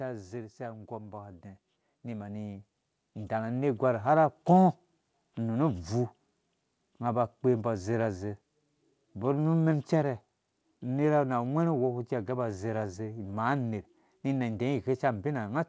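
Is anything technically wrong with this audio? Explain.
Yes. From 0.56 to 4.01 s there is an automatic gain rise: the gain control judged the input too quiet and raised it by about 12 dB, so speech and background swell together. The audio has no content above 8 kHz, which fits a wideband G.722 call path.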